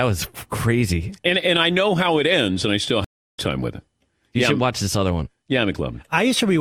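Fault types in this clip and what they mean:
stream reconnect: From 3.04 to 3.39 s the connection drops and the speech stops for 330 ms while the player re-establishes the link and starts a new decoder partway through the stream. When the sound returns, it picks up roughly 0.4 s further along than where it broke off, so a stretch of the speech is skipped, and the first frame from the restarted decoder fades in rather than starting at full level.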